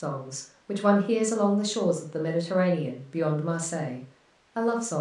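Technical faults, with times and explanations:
No technical faults are present.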